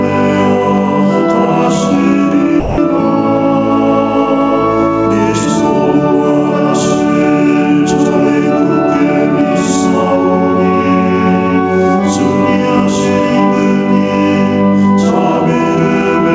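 Gain pumping runs through the whole clip. The gain swings by roughly 5 dB, pulling down under every loud moment, leaving the dynamics squashed. This is likely from input gain set far too high, with a fast limiter clamping down on each peak.

From 2.60 to 2.78 s comes sound dropped by the voice detector. For 180 ms the sound gives way to steady comfort noise, then returns. The sender's detector likely misjudged that stretch as background and stopped transmitting, within a call path band-limited to 8 kHz.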